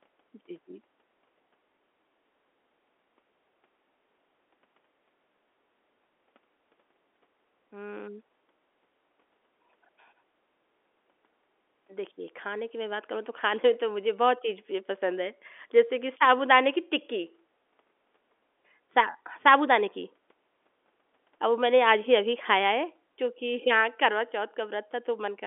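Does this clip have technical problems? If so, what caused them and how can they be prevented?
No, there are no faults.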